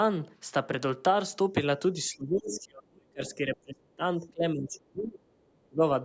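A speech recording from a call, where the echo canceller was likely caught in double talk, unable to tell the local talker from loudspeaker echo, and turned everything down. The result is speech suppressed in double talk: the voice sinks by around 35 dB from 1.93 to 4.02 s, by about 25 dB from 4.19 to 5.28 s, and by around 35 dB again from 5.53 to 5.82 s, dipping and breaking up in those stretches. The same canceller also likely left residue from the far end's loudspeaker in the microphone signal, so the other side's voice is leaking through in two short scraps. One runs from 2.5 to 2.6 s, about 15 dB below the talker. The other runs from 3.26 to 3.34 s and is fainter, around 25 dB down. Both are brief fragments of a second voice that sit inside the suppressed stretch.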